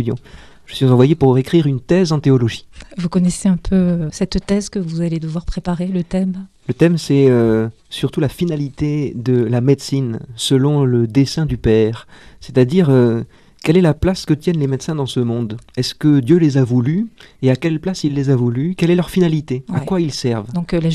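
Nothing stood out on listening to this clip.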